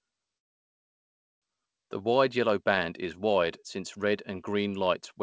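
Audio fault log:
0.38–1.44 s call audio freeze: speech drops into about a second of silence, then resumes where it stopped with nothing lost, likely because delayed packets emptied the jitter buffer.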